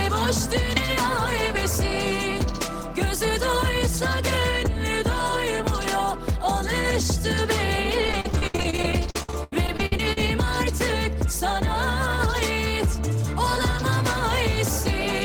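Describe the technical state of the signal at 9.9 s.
At 9.9 s the signal is inside a run of repeated packet loss (robotic sound) lasting from 8.01 to 10.18 s. Over those two seconds, 21 short holes follow one another, the longest about 82 ms. Each is patched by stretching the last received sound, so about a quarter of the stretch is concealed. Unlike a single dropout or a brief mute, the rapid, repeated patching gives a choppy, robotic texture with pieces missing, rather than one clean gap.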